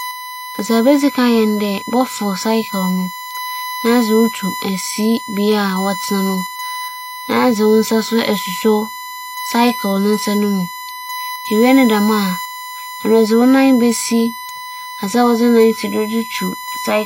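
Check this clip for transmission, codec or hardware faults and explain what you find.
There is one hardware fault, present throughout the speech. A steady, fixed-pitch whine at 1 kHz runs under the whole clip, fairly prominent at roughly 10 dB below the speech, and it does not drift in pitch. This is USB whine: the USB bus draws current in bursts once per 1 ms frame, and that periodic load leaks into the audio path through a shared power supply or ground, producing a tone at exactly the 1 kHz frame rate.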